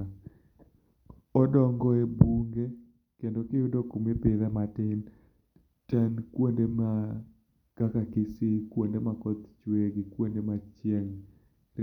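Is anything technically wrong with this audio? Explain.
No, nothing technically wrong can be heard here.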